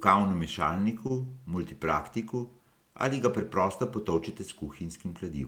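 At 1.07 s, running to about 1.21 s, the speech shows a short stall from a late packet. A packet arrived after its playout time, the jitter buffer ran dry, and the receiver filled about 23 ms by stretching the last sound, then resumed exactly where it left off. What tells this apart from packet loss is that nothing is skipped: the sound is held slightly too long with a slight buzz or dip, and the timeline ends up about 23 ms late.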